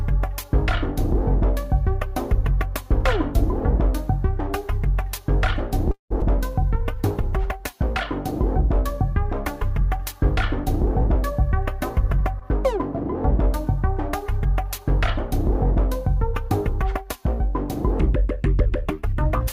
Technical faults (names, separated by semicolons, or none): call audio freeze; skip ahead; jitter buffer slow-down; jitter buffer speed-up